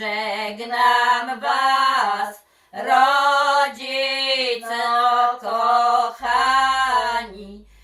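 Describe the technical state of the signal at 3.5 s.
At 3.5 s the signal is intact, with no audible fault at that point.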